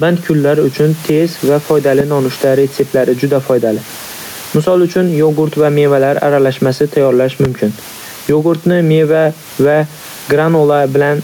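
Gain pumping runs through the whole speech clip. The room noise sits about 29 dB below the speech. The level swings by around 10 dB. Input gain set far too high, with a fast limiter clamping down, is the likely cause.

A loud pop lands at 2.00 to 2.03 s, roughly 15 dB above the speech. A second, smaller pop comes at 7.45 to 7.47 s, about 10 dB up. Each is a single sharp hit, and the speech carries on underneath. A voltage spike from a plug, switch or static discharge is the likely source.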